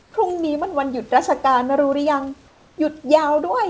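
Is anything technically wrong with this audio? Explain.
Yes. In the pauses from 0.02 to 0.14 s and from 2.48 to 2.78 s, the room background turns into a flat, textureless hiss, about 5 dB and then about 2 dB quieter. This is comfort noise in place of the background: the sender likely stopped transmitting during silence, and the receiver filled each gap with synthetic noise only roughly matching the real room sound. The call path's band limit, with nothing above 8 kHz, fits a G.722 codec.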